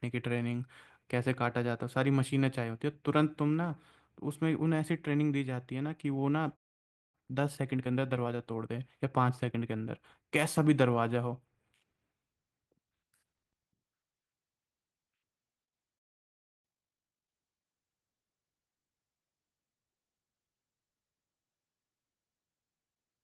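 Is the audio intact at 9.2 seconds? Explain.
No. From 7.15 to 10.15 s the player is running a time-compressed catch-up: having fallen behind after a stall, it trims its backlog by removing short slices of audio and cross-fading across each cut, playing the stretch about 1.1 times faster than real time. At 9.2 s the speech therefore sounds rushed while keeping its normal pitch.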